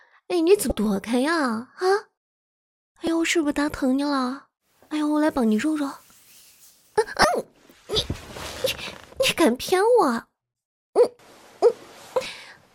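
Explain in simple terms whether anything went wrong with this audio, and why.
Something did go wrong: the audio has damaged data in a compressed stream. Four brief chirps or blips interrupt the sound at 0.68 to 0.71 s, at 3.07 s, at 7.21 to 7.25 s, and at 12.23 to 12.26 s. Each lasts only about one to three hundredths of a second. At those points, part of the compressed file was wrong, so the decoder misread the data, lost its place, and produced a short burst of garbage until it found the next valid frame.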